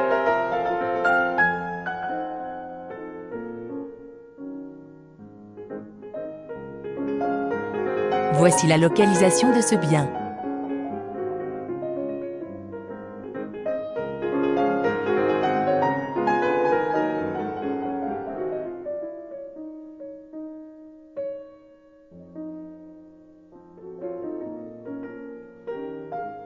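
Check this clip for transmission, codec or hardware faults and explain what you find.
Nothing amiss turned up anywhere in this recording.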